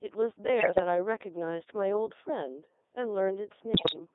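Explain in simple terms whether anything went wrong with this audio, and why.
The speech has passed through the Codec 2 vocoder. It sends only a rough description of the voice, and the receiver rebuilds it from simple tones. That is why it sounds robotic and buzzy throughout. The heavy squeeze also confines it to a thin, radio-like band.

There are also bit errors on digital voice radio, from 0.60 to 0.80 s and from 3.74 to 3.99 s. Corrupted data scrambled the voice settings there, roughly one bit in ten, and more later. The sound jumps in pitch and breaks into warbling gibberish.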